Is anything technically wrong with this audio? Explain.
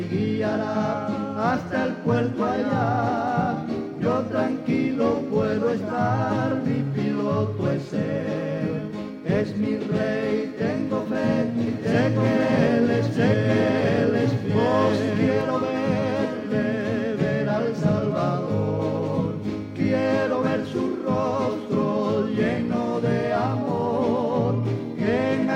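Yes. From 11.67 to 15.41 s, an equally loud copy trails about 1.5 s behind and cuts in and out abruptly. This doubled audio track is likely a slower second capture path.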